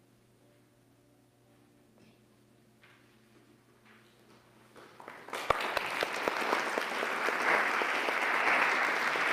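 No technical faults can be heard anywhere in this clip.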